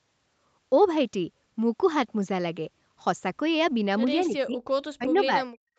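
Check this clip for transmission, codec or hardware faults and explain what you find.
Two stretches of speech suppressed in double talk, from 4.24 to 4.62 s and from 4.89 to 5.46 s. The likely cause is an echo canceller that, with both ends talking at once, could not separate the local talker from the loudspeaker echo and turned both down. The speech sinks by roughly 30 dB in the first stretch and around 40 dB in the second, over a few hundred milliseconds each time. Throughout the clip, the call path's Opus coding keeps nothing above 8 kHz.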